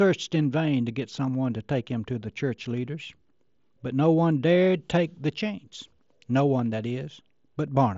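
No technical faults are audible in this speech recording.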